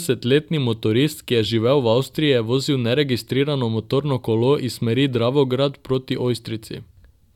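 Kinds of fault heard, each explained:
Nothing stands out here, just the speech coming through as it should with no technical faults to point to.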